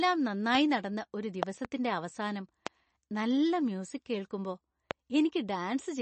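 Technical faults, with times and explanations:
Throughout: MP3 compression. The encoder likely ran short of bits, at a rate that fits roughly 34 kbps, so it dropped weaker frequency components and let others flicker on and off between frames. The speech has a plainly audible watery, swirling texture, with sibilants turning metallic and chirpy and consonant onsets smeared. The treble is also cut off: nothing remains above 8.3 kHz, which dulls the top of the voice.
1.43 to 1.67 s, 2.67 to 2.69 s, 4.91 to 4.93 s: loud pop. Each event is likely a sudden voltage step or spike, from a connector, switch, static discharge or driver glitch, added to the signal and shaped by the circuitry that follows. It is heard as a sharp pop peaking at about 20 dB above the speech, which carries on underneath. The first event holds two pops in quick succession, and the later two are single, making four pops in total.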